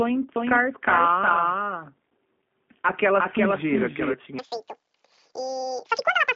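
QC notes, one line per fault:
Throughout: G.729 codec. The audio was carried over a narrowband VoIP link, and the sound fits 8 kbit/s G.729A. The codec rebuilds each frame from a vocal tract filter, a pitch predictor and a few coded pulses rather than sending the waveform. The speech is confined to roughly 200 Hz to 3.5 kHz, with nothing above 3.5 kHz, so it sounds muffled and boxy. The coarse pulse modelling leaves a plainly audible rough, synthetic edge.
0.36 to 4.14 s: doubled audio track. A second copy of the speech was mixed in, likely from a slower capture path running alongside the first. It trails the original by about 0.4 s at about 5 dB lower, so every syllable is followed by a weaker repeat of itself. The copy is full-band with no decay or room colour, and it cuts in and out abruptly at both ends instead of fading.
4.39 to 6.35 s: section at the wrong speed. From here to the end, playback runs at twice the recorded rate, likely because the section was fitted to the wrong clock. 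Speed and pitch rise together, so the speech becomes hurried and chipmunk-like, lifted by close to an octave. The change happens in a single step at 4.39 s rather than gliding, which makes the switch sudden.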